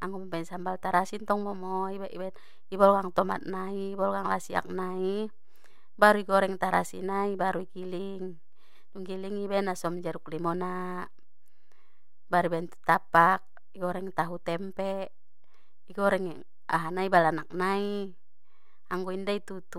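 DC offset runs throughout the speech, a constant shift of about -39 dBFS that moves the waveform off zero, inaudible itself but eating headroom as steady sub-bass energy.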